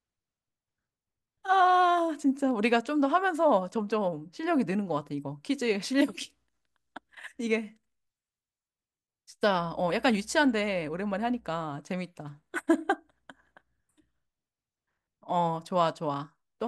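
From 9.56 s to 11.67 s, mains hum sits under the speech: a steady 60 Hz tone with some low harmonics, around 35 dB below the speech level. Power-line current, probably through a ground loop or nearby transformer, has leaked into the signal path.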